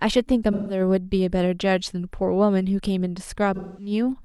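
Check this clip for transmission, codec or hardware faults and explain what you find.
The speech carries two dropouts from AAC frame loss with concealment. The first runs from 0.52 to 0.80 s, the second from 3.55 to 3.91 s. The missing stretches are about 170 ms and 210 ms, which fits four and five lost AAC frames. The decoder had no data there. It rebuilt each gap from the last good spectrum. That guess has no real detail, so each patch sounds smeared, noisy or phasey before clean audio returns.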